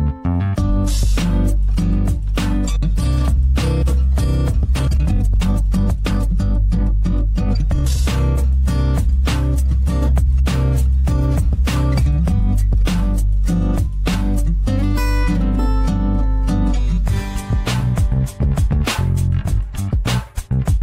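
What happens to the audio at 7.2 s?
At 7.2 s the audio is inside a time-stretched section running from 4.71 to 7.99 s. The likely cause is software squeezing that stretch to fit a shorter length, playing it about 1.83 times faster while holding pitch steady by discarding short slices of the waveform. The result sounds rushed: the pace jumps abruptly at 4.71 s, the pitch stays unchanged, and the audio stays hurried until normal pace returns at 7.99 s.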